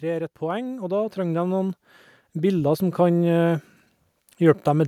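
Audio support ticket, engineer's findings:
Speech and room noise swell together, steadily louder from 0.05 s to 3.09 s, then level off. Total rise about 12 dB over roughly three seconds. Component: capture-side automatic gain control. Automatic gain rising: AGC judged input too quiet at start, ramped gain up gradually until target level reached; background lifts with voice since gain applies to whole signal.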